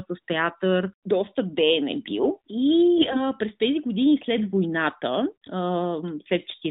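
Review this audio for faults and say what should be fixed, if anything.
From 2.98 to 3.24 s, AMR bit errors make the speech hoarse and gargly. Flipped low-protection bits, at a rate of around 7 percent, misplace excitation pulses and skew the finer pitch, gain and spectral values. The span points to about ten damaged frames. On a spectrogram the harmonics blur into scratchy noise below the narrowband codec's 4 kHz ceiling. The waveform keeps roughly its level.

Stronger channel coding or a more robust AMR mode on the weak link would prevent it.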